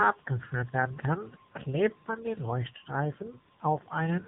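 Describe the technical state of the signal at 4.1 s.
At 4.1 s the speech sounds thin, boxy and somewhat buzzy, with a synthetic edge and nothing above about 3.8 kHz. This is the AMR narrowband mobile codec, present for the whole clip rather than just this moment. The codec samples at 8 kHz and rebuilds the voice from a vocal-tract model excited by a few pulses per short subframe. The plainly audible damage points to a low bitrate of around 8 kbps.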